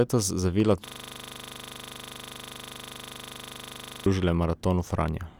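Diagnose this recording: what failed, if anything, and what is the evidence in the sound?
From 0.87 s to 4.06 s the speech freezes into a rattling 25 Hz buzz, one 40 ms fragment repeating about 80 times. This is a system hang loop at the driver or buffer stage: the host stalled while the hardware kept replaying its ring buffer.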